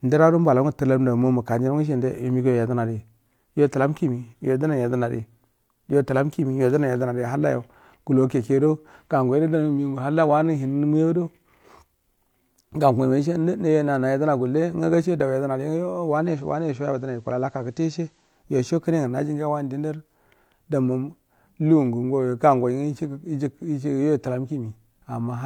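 A speech recording where, from 16.06 s to 18.49 s, the sound loses about 2 dB of level and gains a faint hiss some 40 dB below the signal, before returning to the digital sound just ahead of "yoi so". This is digital radio blending to analogue: the receiver lost its digital stream and cross-faded over 313 ms to the station's FM broadcast, then faded back once the digital signal recovered.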